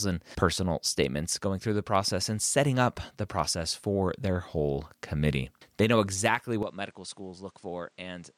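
At 6.63 s, right after "know exactly", the sound changes abruptly and stays that way to the end at 8.37 s. The band stops at 9.8 kHz, the level falls by roughly 10 dB, and a new background noise appears, roughly 35 dB below the speech, with no gap at the change. The likely cause is the input switched to a poorer device. A simple filter or codec change would narrow the band without bringing a different noise floor and level.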